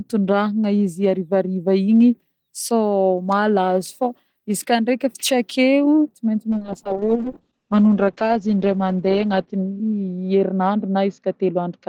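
From 6.54 s to the end, the speech turns rough and muffled, losing its top end. It's a call bitrate drop: the encoder fell from 32 to 8 kbps, coding coarsely and narrowing bandwidth from 20 kHz to 8 kHz, bottoming out for about 2.5 s.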